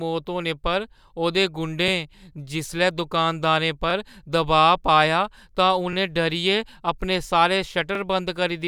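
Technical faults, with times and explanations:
1.88–1.91 s, 3.91–3.93 s, 5.93–5.95 s and 7.95–7.98 s: overlapping chunks. The speech arrives in 2-second blocks, and each block restarts about 23 ms early. That sliver plays twice at each join, giving a brief stutter every two seconds.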